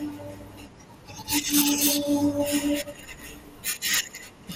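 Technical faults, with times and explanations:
Throughout, MP2 compression: the speech sounds dull and gurgly, likely from a low bitrate around 80 kbps starving upper sub-bands so they flicker off.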